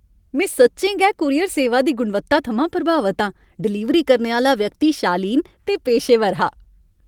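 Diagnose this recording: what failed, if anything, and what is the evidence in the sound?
Nothing failed; the recording shows no fault.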